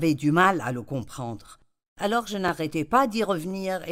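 Overlapping chunks at 0.44–0.46, 1.46–1.48, 2.48–2.51 and 3.51–3.53 s: each one-second chunk starts early, replaying 21 ms of speech as a regular stutter.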